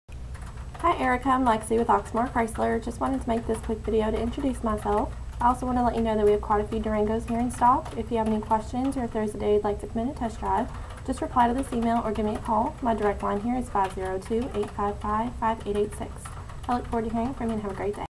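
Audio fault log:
No faults heard anywhere in this audio.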